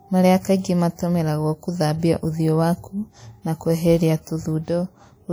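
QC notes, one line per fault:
Throughout: WMA compression, likely the cause of the plainly audible damage across the whole speech clip. There's a ringing, washy smear around transients and a hiss that swells and fades with the signal, the way a transform codec's quantisation noise spreads over long blocks. Weak detail sounds thinned out, which points to a low bitrate, somewhere around 48 kbps. Top end stops at about 20.1 kHz, so the damage is in the coding, not a bandwidth cut.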